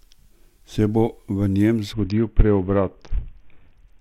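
Bluetooth SBC bit pool drop in this speech from 1.93 s onward: a congested link starves the top sub-bands, dulling treble, while coarse quantisation adds grit.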